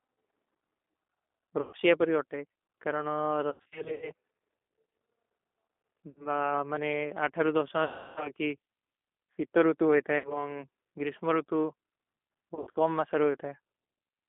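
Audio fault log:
Throughout: G.729 codec. Sound passes only between 250 Hz and 3.6 kHz, and the low-rate 8 kbit/s model leaves it plainly rough and synthetic. A spectrogram shows an empty band above 3.6 kHz and little below 250 Hz.
1.61–1.77, 3.50–4.12, 6.10–6.26, 7.84–8.32, 10.18–10.43, 12.55–12.77 s: VoIP packet loss concealed by the speech codec. The decoder replays its last pitch and filter, producing fading buzz for the 60–320 ms lost. At 3.50 and 12.55 s the losses are scattered. A spectrogram shows smeared, repeating harmonics, and the waveform dips.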